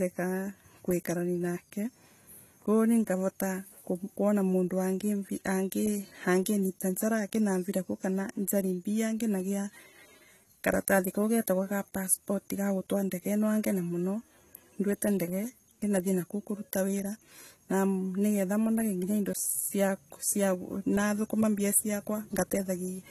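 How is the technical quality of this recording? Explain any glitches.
The recording has plainly audible codec damage running through the whole clip.

AAC compression, throughout: the speech sounds dull and smeared, with a warbling, fizzy edge on sibilants and held vowels, and nothing above 14.1 kHz. The likely cause is lossy AAC-LC encoding at a low bitrate, which the amount of damage suggests is around 32 kbps. At that rate the encoder drops the top of the spectrum and quantises the remaining bands coarsely, so detail shifts from frame to frame instead of staying stable.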